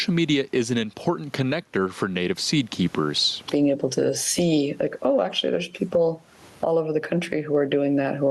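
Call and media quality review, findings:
Gain pumping, throughout the speech. Gain swinging around 20 dB. Likely cause: mic gain set far too high, with a fast limiter or compressor clamping every peak and squashing the dynamics. The room noise sits about 44 dB below speech.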